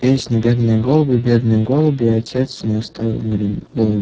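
Throughout, the speech has heavy Speex codec damage. It sounds hoarse, noisy and nearly robotic, which fits a starved bitrate of roughly 6 kbps.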